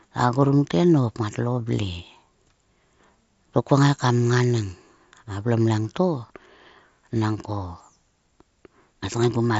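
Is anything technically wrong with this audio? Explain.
No, nothing is technically wrong with this speech. It has the character of a Bluetooth mSBC headset codec, with nothing above about 7.7 kHz and a light graininess on the louder sounds, just as that wideband headset path normally sounds.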